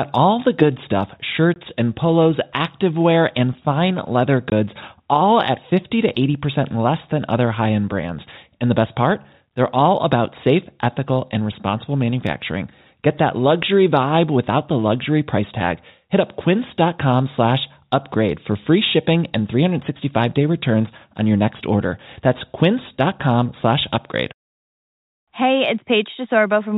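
Packet loss filled with silence occurs at 1.54 to 1.56 s, right after "all the good stuff" and before "and polos activewear," and again at 4.50 to 4.52 s, between "fine leather" and "all at." Each time 20 ms of audio is lost, which fits a single dropped packet. The receiver inserts silence instead, so each gap is a short hole with hard edges, heard over the band-limited sound of the G.711 telephone coding.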